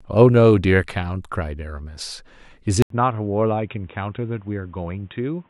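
At 2.82 s the audio drops out for about 80 ms, then returns duller and boxier, with nothing above 3.8 kHz, roughly 5 dB quieter, and new background noise some 40 dB beneath it. This points to an input switched to a poorer device, likely a second microphone or headset call profile. On a spectrogram, energy above 3.8 kHz vanishes at the gap and stays gone to the end; the waveform shows a brief flat line, then smaller peaks.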